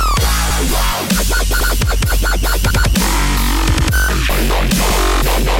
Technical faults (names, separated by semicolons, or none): overlapping chunks